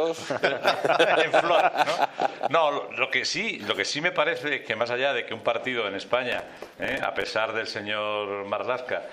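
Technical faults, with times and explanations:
6.32–7.29 s, processor overload crackle: a gritty, tearing crackle rides on the sound for about a second, then stops. The processor is falling behind, missing dozens of tiny buffer deadlines over a short stretch, which fits buffers of around 5 ms. Each miss replays a scrap of old audio with hard edges.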